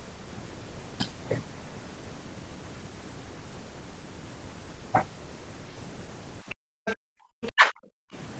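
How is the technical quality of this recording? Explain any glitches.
The last two seconds of this speech clip have echo-canceller trouble. It's band-limited to about 8 kHz with typical call coding, which fits Opus at around 32 kbps. The faults:

Other side's voice leaking through, at 6.50–6.55, 6.85–6.96 and 7.42–7.52 s. Faint scraps of a second voice sit well below the talker. The likely cause is loudspeaker playback the echo canceller didn't fully subtract from the mic.

Background gated by the echo canceller, from 6.55 to 7.26 s and again from 8.00 to 8.13 s. While the far end was playing, the canceller clamped the mic hard, by about 40 dB at its deepest. The room tone drops out, then snaps back when it releases.

Speech suppressed in double talk, from 7.54 to 7.72 s. The talker's own speech ducks very deeply for about 200 ms. Both sides were likely talking at once, and the canceller couldn't tell the talker from the echo, so it pulled everything down together.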